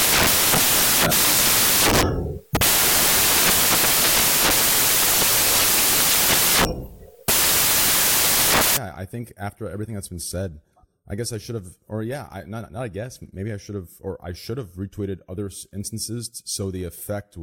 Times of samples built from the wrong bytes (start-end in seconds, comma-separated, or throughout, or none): 0.00-8.77